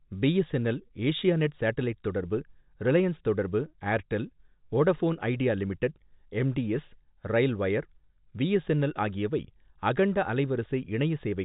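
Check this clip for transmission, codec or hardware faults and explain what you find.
No transmission, codec or hardware faults can be heard in this speech. It carries the narrow band of G.711 telephone coding, with nothing above about 3.8 kHz, and any codec damage is faint at most.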